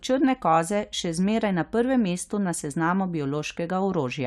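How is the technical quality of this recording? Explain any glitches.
No glitches or faults detected.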